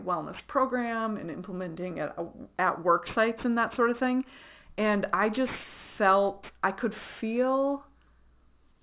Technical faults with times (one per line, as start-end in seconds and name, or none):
0.00-8.83 aliasing